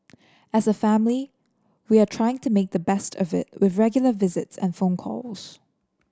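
No technical faults are audible.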